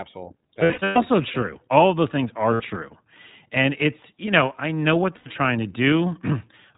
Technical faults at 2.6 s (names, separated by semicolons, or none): iLBC codec; lost iLBC frames